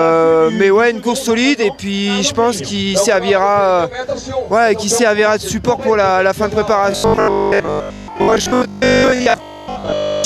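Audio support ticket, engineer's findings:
Robotic sound from repeated short buffers, 6.92 s to 10.24 s, running to the end. Rigid metallic buzz locked at 50 Hz, fitting a 20 ms repeated block. Likely cause: audio delivery stalling, so the playback side loops its last buffer instead of new data. Most of that stretch is repeats, the real audio skipped. Loose outline of the sound survives.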